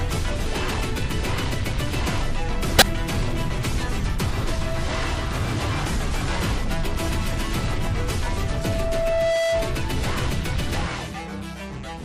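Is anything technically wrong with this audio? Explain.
Yes. The sound was likely squeezed through MP3 encoding at a low bitrate, around 64 kbps. Weak frequency lines are dropped and treble is cut, so the codec damage is plainly audible as watery, swirly smearing throughout.

At 0.45 s and again from 2.77 to 2.82 s, damaged data in the compressed stream made the decoder lose its place and resynchronise, causing brief disruptions.

From 8.30 to 9.83 s, a loudspeaker feedback squeal occurs as a microphone-to-speaker loop exceeds unity gain at 661 Hz. The tone builds over about a second to roughly the level of the surrounding sound.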